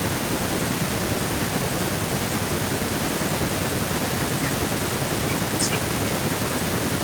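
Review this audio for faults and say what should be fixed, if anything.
Nothing stood out on listening to this speech recording, so there is nothing here that needs fixing.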